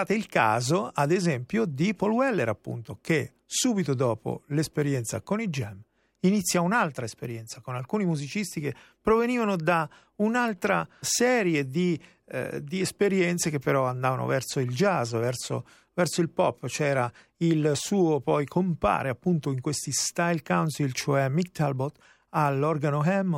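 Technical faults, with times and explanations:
No technical faults can be heard.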